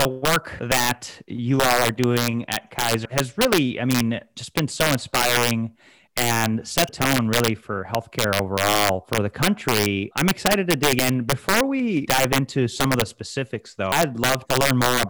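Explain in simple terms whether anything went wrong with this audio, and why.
Two problems can be heard in this speech recording.

Integer overflow runs through the whole clip. The recording was turned up too far, and on the loudest moments, roughly one sample in a hundred, the numbers went past the biggest value the format can store. Instead of being held at that ceiling, they wrapped around to the opposite extreme. Each such peak jumps from maximum to minimum, producing harsh cracks on loud syllables, much sharper and nastier than ordinary clipping distortion.

Damaged data in a compressed stream shows up as five brief glitches, at 0.58, 3.04, 6.88, 10.99 and 13.91 seconds. At each point, part of the compressed file was corrupted. The decoder couldn't read those bytes properly, lost its place, and had to hunt for the start of the next readable block. Each lasts only a hundredth or two of a second and comes across as a short chirp or blip.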